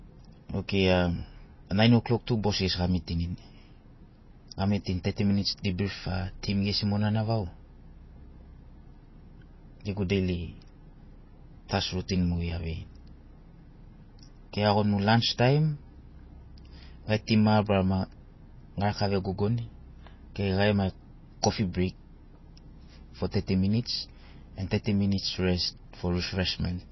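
From start to finish the speech has a watery, swirling quality, and nothing comes through above 5.8 kHz, so the top end sounds dull and clipped off. The damage is plainly audible. The likely cause is MP3 compression at a low bitrate; the sound fits something around 24 kbps. With that few bits, the encoder drops weaker frequency detail that then flickers in and out between frames, and it trims the treble at a fixed ceiling.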